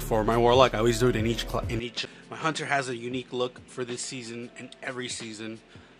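Input switched to a poorer device at 1.79 s, likely: from there to the end the sound is about 10 dB quieter, with nothing above 10.5 kHz and a faint new noise floor, with no gap at the change. A CD skip at 2.05 s follows: the laser jumped tracks, muting very briefly with a tick before playback resumed from a different point on the disc.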